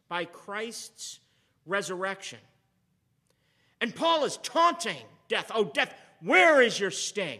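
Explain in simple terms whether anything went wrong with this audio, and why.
Nothing went wrong with this audio; there are no faults to hear in it.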